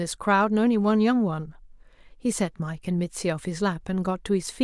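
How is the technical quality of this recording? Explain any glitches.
No technical glitches can be heard in this recording.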